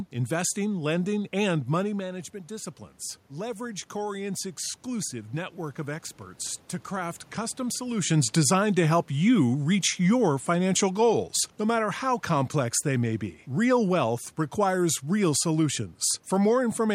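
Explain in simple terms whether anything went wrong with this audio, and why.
Something did go wrong, briefly. Right after "and money management disciplines", from about 3.31 to 6.06 seconds, there is automatic gain rising. The voice had become quieter, so the system slowly turned up its volume. The voice and the room noise grow louder together.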